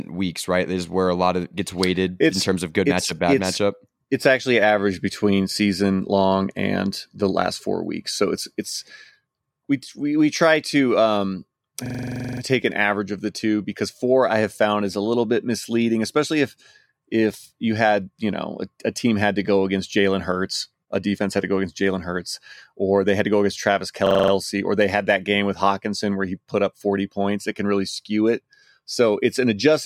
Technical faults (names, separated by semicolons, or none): system hang loop